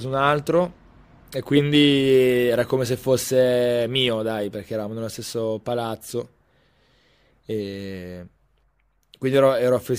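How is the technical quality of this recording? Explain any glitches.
No glitches or technical faults turn up anywhere in the recording.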